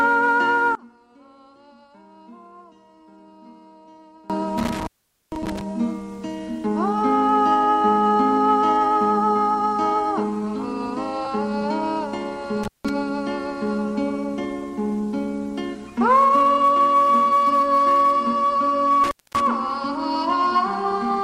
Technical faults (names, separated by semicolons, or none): one channel inverted; intermittent contact